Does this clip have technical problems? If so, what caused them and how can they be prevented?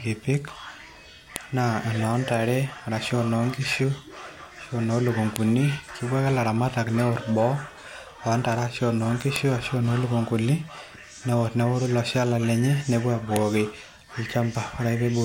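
Yes. Four sharp, loud clicks cut through the speech at 1.36, 5.36, 9.36 and 13.36 s, spaced exactly 4 s apart regardless of what the voice is doing. That regular spacing marks a file header played as audio: the stream was assembled from 4-second WAV pieces, and each piece's header bytes were read as samples, producing a brief burst of garbage at every join. Strip headers from every piece after the first, or concatenate raw PCM data, before joining or streaming.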